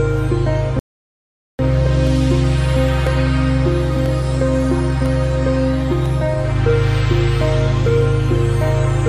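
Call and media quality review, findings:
Rebuffering stall, 0.79–1.59 s: playback halts to silence for about 0.8 s, then resumes exactly where it stopped. Player-side buffer underrun, where downloaded audio ran out and it waited for more. Nothing skipped, time only added, which separates it from a dropout or packet loss.

Periodic USB or driver dropouts, 2.07–7.06 s: short silent gaps of about a millisecond, every 1.0 s, heard as regular ticks. Probable cause is a background task blocking the USB bus or audio driver. Spacing is exactly even and clicks sound only over signal, unlike random network loss.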